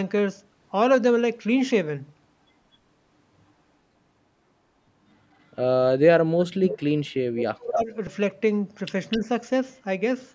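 At 2.17 s the speech jumps forward with a brief skip, joined without silence. It most likely comes from audio missing between chunks, with a sliver dropped as one block closes and the next opens. At 5.33 to 5.43 s a very faint delayed copy of the voice appears about 250 ms behind it. This is likely echo leak: the far side's loudspeaker sound got past its echo canceller and returned. From 6.3 to 7.93 s the voice sinks in pieces, at worst to near silence. This is likely speech suppressed in double talk, with the canceller ducking the talker while both sides spoke. The same brief skip recurs at 8.07 s. At 9.11 to 9.19 s a much plainer echo arrives about 257 ms late. Overlapping it, from 9.18 to 9.23 s, the voice dips slightly as the suppression likely returns.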